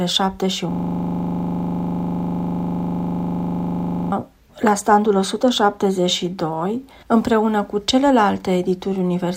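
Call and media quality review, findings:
System hang loop, 0.72 to 4.12 s: a 40 ms slice repeating at 25 Hz, a buzzy stutter. Likely the driver froze while the hardware kept replaying its ring buffer.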